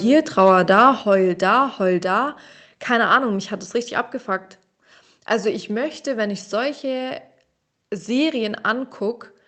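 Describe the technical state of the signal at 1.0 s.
A microphone volume step-down at 1.02 s drops the speech and background together by about 5 dB, just before "heul da heul". The likely cause is call software lowering the device's input volume in one step after judging the microphone too loud.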